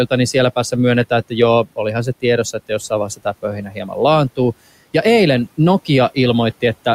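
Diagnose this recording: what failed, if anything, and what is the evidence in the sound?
The call-processing stage failed. Between 3.07 and 3.97 s the noise suppressor mistook parts of the speech for noise, so soft consonants and word endings sound swallowed and faint, with around 0.4 s of that stretch affected and the deepest dip about 16 dB. The suppressor's gain fell on low-level speech as if it were background, even though the room noise sits about 24 dB under the voice. On a waveform the envelope collapses in short notches; a spectrogram shows faded high-frequency consonant energy.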